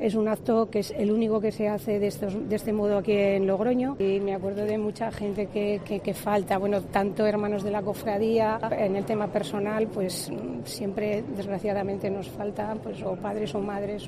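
No technical faults can be heard anywhere in the recording. Nothing in it calls for a time mark or a correction.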